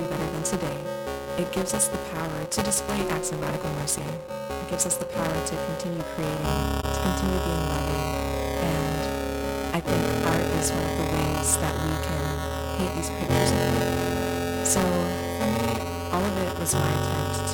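Buffer tearing runs throughout: the writer and reader cross each period, splicing in stale audio and giving a 345 Hz rattle that fits a 128-sample buffer. AAC frame loss with muting at 6.81 to 6.84 s, consistent with one lost frame, zeroes 21.3 ms and leaves a brief dip.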